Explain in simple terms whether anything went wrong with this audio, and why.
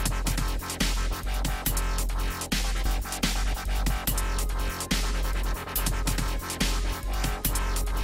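Around 2.85 to 3.00 s the audio suddenly jumps forward, with roughly a second missing: a skip ahead, where audio was dropped in transit or by an overflowing buffer. From 3.45 to 5.43 s it runs at 102% speed at the same pitch, trimming about 50 ms in total: a jitter buffer speed-up, cutting delay after audio piled up.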